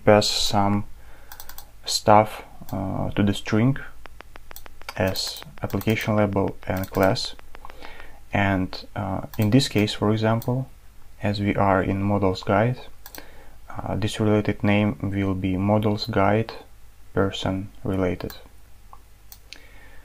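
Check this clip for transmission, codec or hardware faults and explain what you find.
One fault is present. From 4.06 to 8.01 s there is a train of clicks: about thirty similar pulses at a regular 6.6 per second, reaching a few dB above the audio. The likely cause is interference or a faulty connection or power supply. It is heard as steady ticking over the sound and in pauses.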